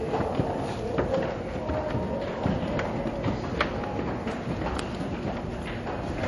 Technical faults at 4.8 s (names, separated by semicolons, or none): MP3 compression; electrical switching spike